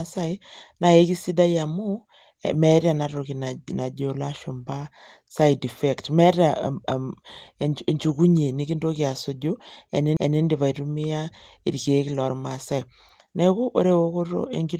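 At 10.17 s the speech is broken by a CD skip: the playback mutes for roughly 2 ms, leaving a small tick, and then resumes from a different point on the disc. The laser has been knocked or thrown by a flaw onto another turn of the spiral, so the audio jumps by a whole number of disc revolutions. The result is an abrupt discontinuity in the speech rather than a gap. The Opus voice coding underneath sounds lightly coloured but keeps its full band.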